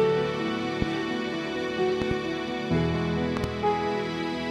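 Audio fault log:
0.82–0.84 s, 2.02–2.13 s and 3.37–3.46 s: loud pop. First a single sharp pop, then two double pops. Each peaks about 15 dB above the sound, which continues underneath. A sudden voltage pulse, likely from a plug, switch or static, was added to the signal.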